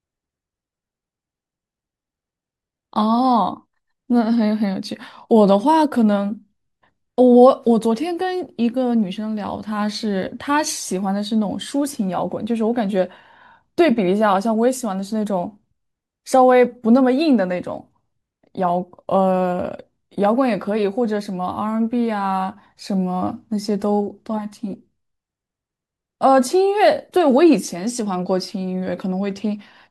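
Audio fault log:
Nothing to log here: listening through this speech recording turns up no faults at all.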